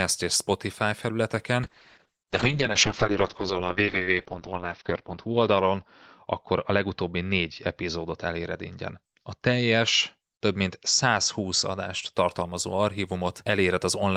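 A call bitrate drop from 1.65 to 12.19 s takes coding from 32 to 7 kbps and the band to 6 kHz, muffling and coarsening the speech.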